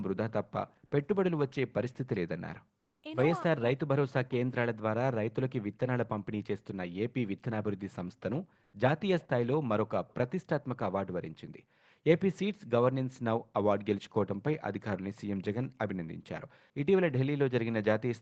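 A speech clip carried over an Opus call path with audio topping out near 8 kHz. From 2.83 to 3.01 s, discontinuous transmission in the Opus sender likely stopped sending during a pause, so the receiver generated comfort noise in place of the background: for 180 ms the faint real ambience, about 52 dB under the loudest speech, becomes a flat, featureless hiss about 2 dB quieter. Between 3.43 and 5.14 s, the echo canceller likely mistook simultaneous talk from both ends for its own echo, and the speech is suppressed in double talk: the talker's voice dips and breaks up in pieces adding up to about a second, at worst falling roughly 40 dB to near silence.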